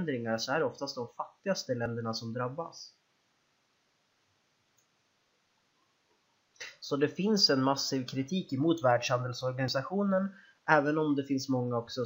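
At 1.86 s and 9.68 s the audio jumps abruptly with no gap, losing about 20 ms each time. The likely cause is a dropped buffer (overrun). On a waveform each shows as a discontinuous step, and on a spectrogram as a thin vertical broadband line.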